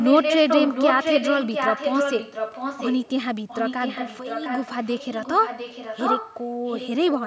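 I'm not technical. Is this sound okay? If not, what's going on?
No. There's an echo leak: the speech repeats about 0.7 seconds later as a separate copy, from the start to 3.08 s, from 3.48 to 6.46 s, and briefly from 6.65 to 6.9 s. At first the copy is about as loud as the speech itself; later it's quieter. Unlike room reverberation, which blurs sound, this is a distinct delayed repeat. The likely cause is that someone on the call used a loudspeaker and their echo canceller didn't fully remove it.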